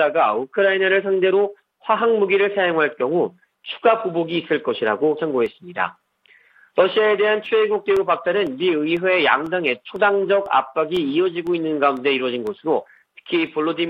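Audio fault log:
5.46 to 13.47 s, periodic USB or driver dropouts: every 0.5 s a tiny slice of audio, roughly half a millisecond, is replaced by silence as a blocking background task stalls the audio path, giving about fifteen evenly spaced ticks that sound only where signal is present.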